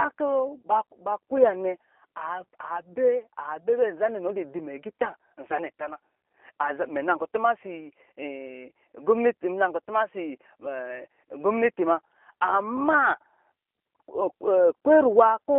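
From start to finish the speech carries plainly audible G.729 codec damage: 8 kbit/s pulse-coded synthesis within a 300 to 3400 Hz line band, leaving it rough, synthetic and muffled.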